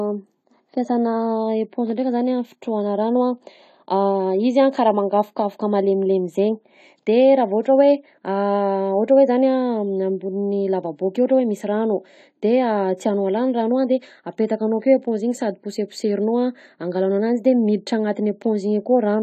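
From start to finish, the speech sounds dull and smeared. Nothing is heard above 14 kHz, so the top of the spectrum is simply gone. Sibilants turn fizzy, and sustained sounds carry a warble. The damage is plainly audible. The likely cause is AAC compression, AAC-LC, at a rate that fits roughly 32 kbps. At that rate the encoder cuts the high band and quantises the remaining frequency lines coarsely, leaving gaps that shimmer.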